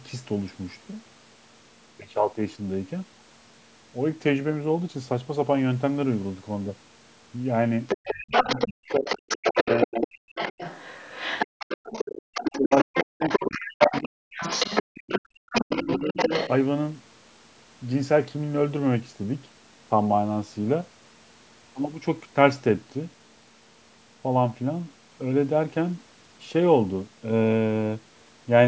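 A speech recording in which a second voice leaks in under the talker from 7.88 to 9.85 s, from 10.35 to 15.19 s, and from 15.52 to 16.5 s, only slightly quieter at first and about as loud as the talker by the last stretch. This is the other side's voice leaking through, most likely loudspeaker playback that the echo canceller failed to remove from the microphone. Overlapping those stretches, the talker's own speech dips very deeply or breaks up from 8.56 to 10.26 s, 12.5 to 14.23 s and 15.18 to 16.17 s, each time for around a second or less in total. That is speech suppressed in double talk: with both sides speaking at once, the canceller likely attenuated everything. The room sound also drops out by about 30 dB for brief moments at 11.47 to 11.59 s and 14.83 to 14.9 s, background gated by the echo canceller as it clamped down on the microphone while the loudspeaker played. The call's microphone processing, which leaves nothing above 8 kHz, is not one of the faults.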